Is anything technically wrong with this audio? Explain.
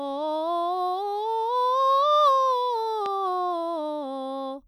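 Yes. A single loud pop, about 10 dB above the music, cracks through from 3.06 to 3.08 s, most likely a sudden voltage spike from a switch or static discharge.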